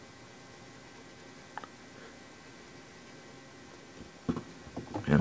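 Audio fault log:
Nothing stood out on listening, and the audio sounds as expected for a call carried over a G.722 path, with nothing above 8 kHz.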